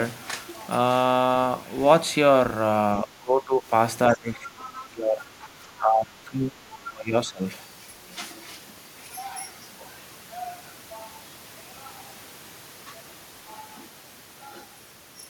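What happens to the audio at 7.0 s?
From 6.85 to 7.42 s the speech dips by about 25 dB and thins out in pieces: speech suppressed in double talk, likely an echo canceller turning down the near talker along with the loudspeaker echo as two talkers overlapped. The ragged partial dips set it apart from a clean dropout.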